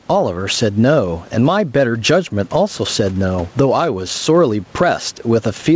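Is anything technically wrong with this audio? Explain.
Yes. Gain pumping runs through the whole clip. The microphone gain is likely set far too high, so a fast limiter or compressor clamps down on every loud stretch of speech and releases in the pauses, swinging the level by about 15 dB. The room noise sits about 39 dB below the speech. Loud and quiet passages end up squashed close together in level.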